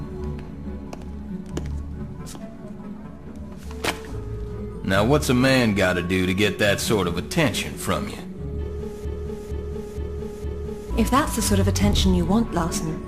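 The player or stream most likely stalled at 9.05 s and kept resending the last fragment it held, producing a broken-record loop that runs until 10.9 s. A piece about 0.46 s long plays four times in a row, each copy identical and butted against the next, so the audio stutters in a fixed rhythm for nearly two seconds. Whatever should have been heard in that span is gone, and the sound resumes after the last repeat.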